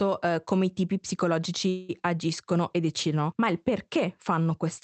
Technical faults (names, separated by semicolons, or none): call audio freeze